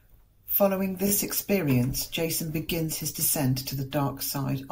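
Repeated frames at 1.07 to 1.12 s: a single 20 ms block of the compressed speech was delivered again and played two extra times, so the decoder repeats that sliver of sound. It comes across as a brief stutter, and the clip runs 40 ms longer.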